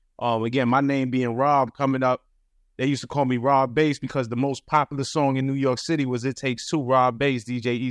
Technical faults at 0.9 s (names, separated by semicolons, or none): none